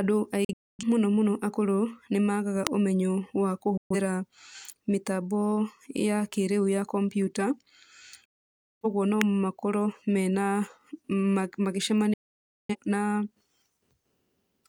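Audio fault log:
0.45–0.84 s, 3.77–3.96 s, 8.25–8.85 s, 12.14–12.76 s: digital broadcast dropout. The speech mutes with a 3 ms fade whenever frames stop arriving intact. The first hole is broken into short gaps, the longest 0.26 s. Later gaps run 0.13 s and 0.55 s, and that content is lost.
2.67 s, 9.21 s: electrical switching spike. A sharp snap or tight cluster of clicks sits on top of the speech each time, very brief and unrelated to the programme, likely an arc from a nearby switch, motor or static discharge coupling into the audio line.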